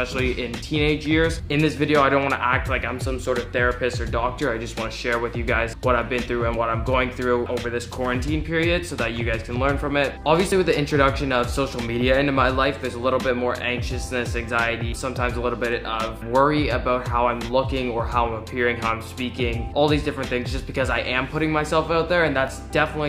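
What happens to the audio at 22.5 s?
An overlap between stream segments occurs at 22.48 to 22.50 s: two neighbouring chunks of the stream carry time stamps that claim the same stretch, so the player trims the shared part even though that sound was never duplicated. About 27 ms of real audio is thrown away there, and the waveform steps straight from one point to a later one, which is heard as a brief click or a tiny skip in the sound.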